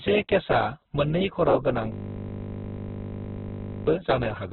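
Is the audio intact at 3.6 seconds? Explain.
No. At 3.6 s the audio is inside a system hang loop running from 1.92 to 3.87 s. A 20 ms slice of speech repeats continuously at 50 Hz while the driver is stalled and the hardware keeps replaying the same ring buffer, so it sounds like a steady, flat buzz.

The whole clip, including this moment, is muffled and grainy, with nothing above 4.2 kHz and rough, noisy detail in the tones. This is likely Opus compression in its CELT mode at a very low bitrate, which fits roughly 8 kbps narrowband encoding.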